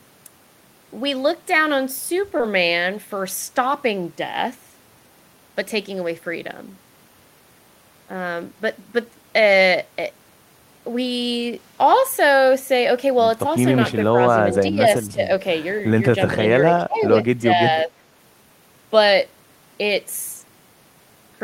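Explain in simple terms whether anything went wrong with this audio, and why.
Yes, three things go wrong. At 2.37 to 2.43 s there is a short concealed packet loss. About 20 ms of the call arrived too late, and the receiver covered the gap by stretching the sound just before it. You hear a brief smear or wobble rather than silence.

At 14.51 to 14.58 s there is an echo leak: a faint, delayed copy of the speech, trailing it by about a third of a second. This is likely a loudspeaker on one end whose echo canceller let part of the sound slip back.

From 14.68 to 17.90 s there is speech suppressed in double talk, at 14.68 to 14.88 s, 15.10 to 15.22 s, 16.82 to 17.13 s and 17.42 to 17.90 s. The voice sinks in level, slightly in some places and sharply in others. This is likely the echo canceller turning everything down while both sides spoke at once.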